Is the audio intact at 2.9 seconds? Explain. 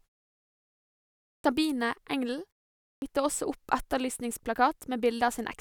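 No. A clipped start after a pause runs from 2.91 to 3.02 s. The output needs time to wake after a 0.47 s silence, swallowing about 110 ms, so the sound starts abruptly with a hard-edged waveform onset.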